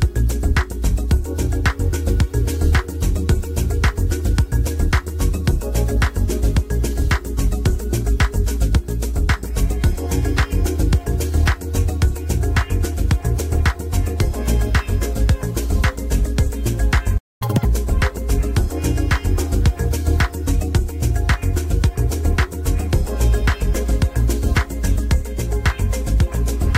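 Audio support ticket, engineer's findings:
Playback stall, 17.17 to 17.42 s: output drops to silence for about 230 ms mid-flow. Likely player buffer underrun or blocked audio thread. Waveform: flat zero-line gap with abrupt edges; spectrogram: clean vertical blank band across all frequencies.

Catch-up at higher speed, 17.42 to 17.65 s: backlog resampled at 2x speed, pitch raised roughly ten semitones, then snaps back to normal. Player time-recovery logic. Spectrogram: harmonics shifted sharply upward and compressed in time; waveform: denser cycles for that span.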